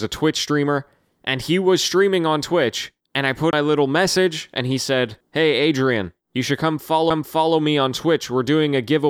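It's a speech recording with two CD skips. The first hits between 3.51 and 3.53 s, right before "little message and he": a brief mute of roughly 20 ms, and the speech resumes from a different spot. The second is at 7.10 s, between "you should" and "me on", with a mute of just a few milliseconds before the jump. Both come from the laser jumping, through a knock or a flaw, onto another turn of the disc's spiral and picking up the track from there.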